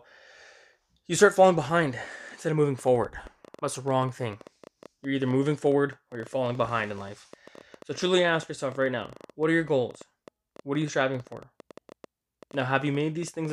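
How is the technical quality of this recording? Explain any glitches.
The recording is marred by one persistent fault. From 2.79 s, right after "behind instead of moving", to 13.51 s, a train of clicks runs at about 10 per second, unevenly spaced, roughly a hundred in all. They are likely from electrical interference or a faulty connection or power supply injecting near-identical pulses. They are heard as ticking over the speech and through its pauses, reaching roughly the level of the speech itself. A spectrogram shows them as thin vertical broadband lines, and a waveform as sharp spikes at irregular intervals.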